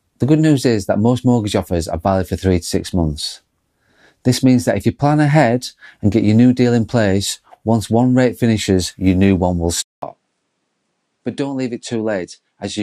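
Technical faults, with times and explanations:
9.82 to 12.83 s, input switched to a poorer device: right after "your new one will" there's a 200 ms silence, then the speech comes back duller, with nothing above 10.5 kHz, roughly 5 dB quieter and with a faint new noise floor well below it. That's likely the input hopping to another microphone mid-recording, a different device with its own narrower band, level and background, which is why the tone changes in one step rather than drifting.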